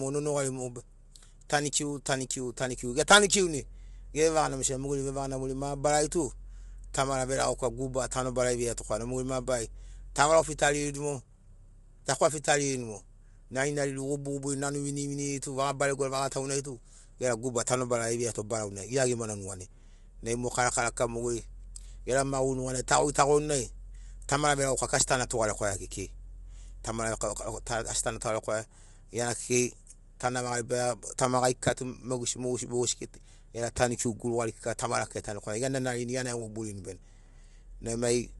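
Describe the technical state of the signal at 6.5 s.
At 6.5 s the speech carries low-delay AAC compression damage, present across the whole clip rather than confined to this moment. The sound is plainly rough and grainy, with noise filling the gaps between voice harmonics and nothing above 11.6 kHz. This likely comes from AAC-ELD coding at a low bitrate, consistent with about 32 kbps. Its short frames resolve pitch harmonics poorly, and at this bitrate the encoder leaves audible grit.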